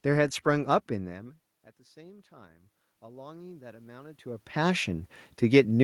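From 0.88 s to the end, automatic gain rising: the level at the microphone fell by about 23 dB, and the gain control slowly raised its gain in response. Voice and room noise swell together instead of the level staying steady.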